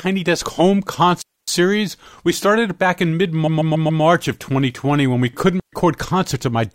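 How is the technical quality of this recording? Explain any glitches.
The recording has three glitches: two digital wireless dropouts and one stretch of repeated frames.

From 1.22 to 1.48 s, and again from 5.60 to 5.73 s, there is a digital wireless dropout. The receiver lost too much of the data stream and muted its output, leaving clean holes of near silence lasting about 258 ms and 127 ms. The mute fades quickly and there is no burst of noise on either side, which is why it sounds like a gap rather than a crackle.

Between 3.46 and 4.02 s there are repeated frames. A block of about 139 ms of compressed audio, which fits a run of several codec frames, is played four extra times. The sound stutters as the same stretch plays again. The repeats add about 557 ms, so everything after this point arrives later than it should.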